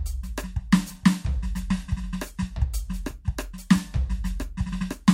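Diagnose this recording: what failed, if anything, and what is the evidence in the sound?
Nothing in the chain failed; the music shows no audible evidence of a fault at any stage. No stage shows a problem.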